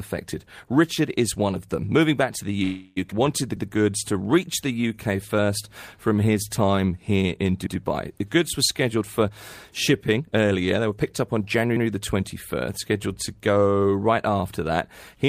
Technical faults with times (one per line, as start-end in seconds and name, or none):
2.63-2.98 call audio freeze
3.10-3.13 skip ahead
3.78-5.47 jitter buffer slow-down
6.09-6.76 jitter buffer slow-down
7.66-7.77 overlapping chunks
8.96-9.32 jitter buffer speed-up
10.16-12.15 jitter buffer speed-up